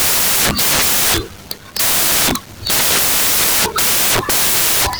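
A speech clip, but what you actually hear from start to finish is loud, harsh broadband noise, close to white on the louder passages, because the samples are built from the wrong bytes. The reader is assembling each value misaligned or byte-swapped, so the jittery low bits land in the high-order position.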